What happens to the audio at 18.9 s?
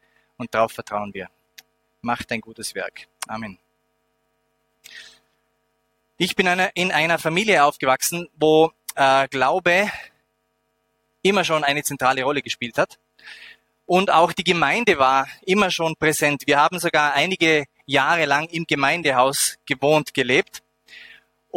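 Nothing goes wrong at 18.9 s; the audio plays through that moment intact, with no audible fault.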